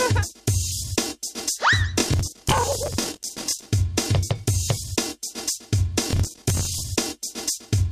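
Processor overload crackle runs from 2.00 to 3.68 s and again from 6.11 to 6.80 s. The processor kept missing buffer deadlines, so dozens of short, hard-edged chunks of stale audio replayed in place of new sound. The rapid tearing points to buffers of around 10 ms.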